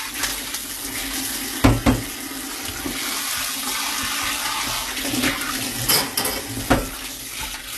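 HE-AAC compression runs throughout this everyday-sound clip: treble ends near 12.3 kHz and turns gritty and metallic, likely spectral band replication rebuilding highs at around 16 kbps.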